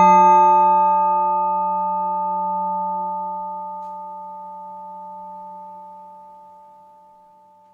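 No technical faults can be heard anywhere in the recording, with the signal holding steady throughout.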